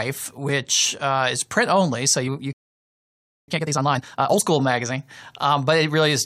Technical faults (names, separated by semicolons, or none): playback stall; time-compressed catch-up